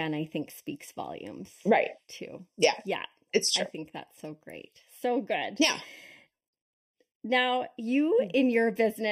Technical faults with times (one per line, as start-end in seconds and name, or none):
0.00-9.11 channel delay (comb filtering)